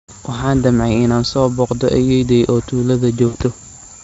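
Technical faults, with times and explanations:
3.27–3.35 s, VoIP packet loss concealed by the speech codec: a gap of about 60 ms, which fits three lost 20 ms frames, is filled by the Speex decoder repeating its last pitch period and spectral envelope at falling gain. The speech smears into a brief buzzy, coloured tone that fades instead of cutting to silence. Because each decoded frame depends on the one before, the speech sounds weakened or distorted for a short time after packets resume.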